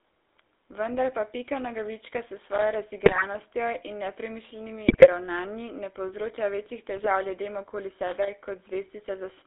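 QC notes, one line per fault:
Throughout, GSM full-rate codec: the speech has a buzzy, gravelly roughness and sits in a band of about 300 Hz to 3.7 kHz. The vocal tract is modelled and driven by a thinned, regularly spaced pulse excitation, which fits a 13 kbps full-rate encoding.
3.04–3.23 s, 4.88–5.08 s and 6.96–7.07 s, GSM bit errors: squawks, pops and gargling occur in bursts lasting about 0.1 to 0.2 s. Corrupted filter, pitch and gain values distort the spectrum and level frame by frame. The second burst falls between "in nepremišljenimi" and "ravnanji ne povzroča večjih". The third falls between "ravnanji ne povzroča večjih" and "ljudem okoli".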